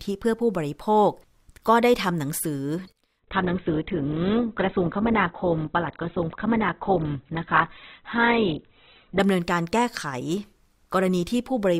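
Adaptive stream at a lower bitrate, from 3.2 s to 9.2 s: the stream switches abruptly, with no gap, to a lower-quality version. The speech loses everything above 4.2 kHz and turns coarse and artefact-laden, which fits a drop from roughly 64 kbit/s Opus to about 8 kbit/s.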